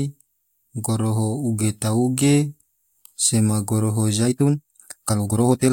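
At 4.19 s to the end, the speech suddenly plays about 1.93 times faster at unchanged pitch. This time-stretched section sounds rushed, likely from dropped short pieces.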